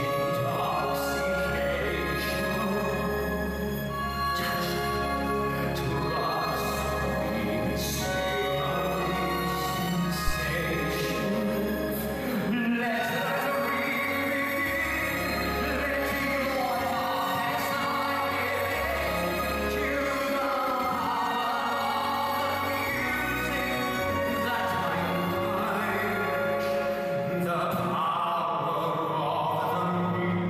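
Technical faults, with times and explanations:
10.28 to 10.34 s, phantom power thump: a deep, short thump peaking at about -16 dBFS that dies away in about 14 ms. Switching a supply on a live input sends a voltage step through the coupling capacitors, which the input reproduces as a low-frequency pulse.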